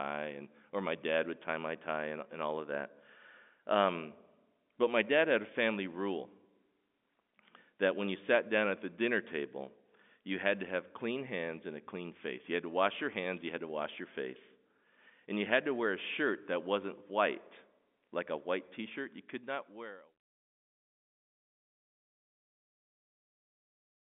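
No faults are audible here; the speech is band-limited like a telephone line and eases out smoothly at the end by design.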